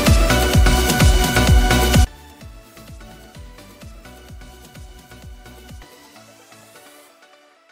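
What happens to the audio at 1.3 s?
Nothing goes wrong at 1.3 s; the audio plays through that moment intact, with no dropout, click or distortion.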